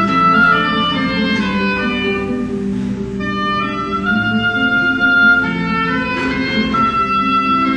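No technical faults can be heard in this audio. Nothing in it marks a point where the signal path went wrong.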